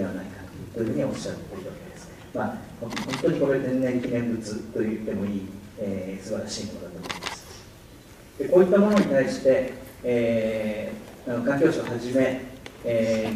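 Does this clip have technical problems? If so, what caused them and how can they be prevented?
No, there are no technical faults.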